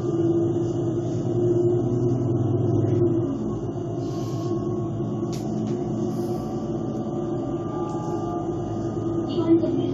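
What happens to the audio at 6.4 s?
Nothing goes wrong at 6.4 s; the audio carries on intact through that moment, with no dropout, click, distortion or other fault.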